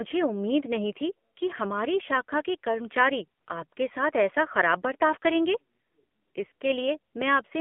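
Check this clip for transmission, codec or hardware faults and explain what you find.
One fault runs through the whole clip. AMR narrowband mobile codec: speech was squeezed through a low-rate vocal-tract model, plausibly the 7.4 kbps mode, confining it to 200 Hz–3.4 kHz and leaving a plainly audible buzzy, synthetic edge.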